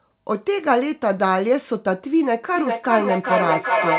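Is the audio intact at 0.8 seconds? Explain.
Yes, the audio at 0.8 seconds is intact, carrying only the narrowband character of the call path, whose G.711 mu-law coding leaves nothing above 4 kHz.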